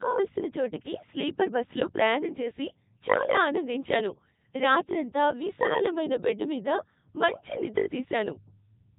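From start to finish the speech passes through a Codec 2 vocoder, heavily damaged. Only pitch, voicing, energy and envelope survive, resynthesised as sine waves, which fits Codec 2's 3.2 kbit/s mode. It sounds robotic and buzzy; spectrograms show smeared, evenly combed harmonics, waveforms lose original shape.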